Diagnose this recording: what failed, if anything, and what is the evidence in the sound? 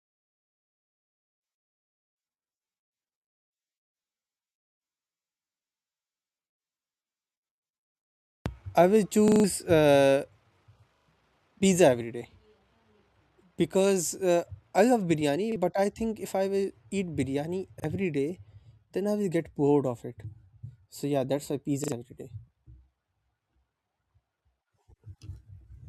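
Driver or buffer stage: repeated buffer stutters at 9.28, 10.96, 15.52, 17.8 and 21.84 s. Fresh audio arrived late, so the same 40 ms chunk replayed with hard joins.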